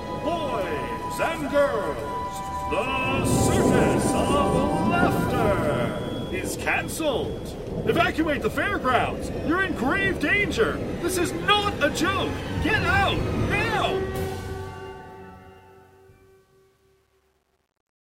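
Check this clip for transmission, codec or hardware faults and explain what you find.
One fault is present: truncation distortion on the fade-out. The fade begins around 13.7 s. From 13.74 s to the end at 18.05 s the fading sound turns gritty. From 14.96 s it is at its worst. The level stage keeps too few bits and adds no dither, which fits about 10-bit resolution. Near the smallest steps the waveform becomes coarse square steps.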